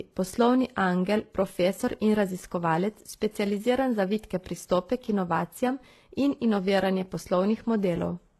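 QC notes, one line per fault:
throughout: transcoding between lossy codecs; nothing above 12.3 kHz, with swirly smearing and a second codec's grain layered on top, likely from low-bitrate HE-AAC re-encoded as WMA.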